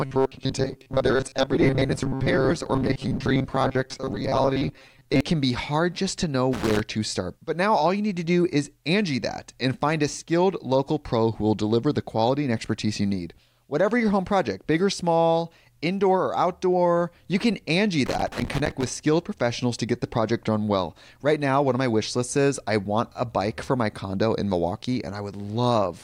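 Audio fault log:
0.01–5.21 s, robotic sound from repeated short buffers: The speech turns into a rigid, metallic buzz fixed at 133 Hz that still loosely tracks the syllables, ending just before "can be hard just". The likely cause is audio arriving too seldom, with the gaps filled by looping the last fragment, about 7.5 ms long, so roughly half the real sound is skipped. Unlike crackle, the buzz has a steady pitch and never breaks into random clicks.
6.53–6.80 s and 18.06–18.86 s, loose connector crackle: Irregular bursts of crackle and scratching cut into the signal, the first between "hard just to know" and "to start", the second just before "skilled professionals to get". A contact making and breaking rapidly chops the audio, which is heard as crackle. Unlike the buffer repetition, these bursts have no steady pitch and follow no regular rhythm.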